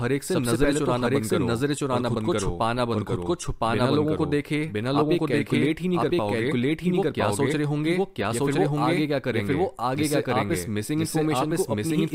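From start to finish the speech carries an equally loud, dry copy trailing about a second behind: a doubled audio track, likely from a second, slower capture path.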